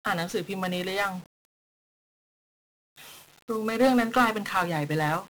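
From start to end, the speech carries 1-bit DFPWM compression. Each sample keeps a single bit that nudges an adaptive level up or down. The damage is heavy. Strong broadband noise makes everything fuzzy and crackly, and hiss buries the treble. This fits a rate near 48 kbps.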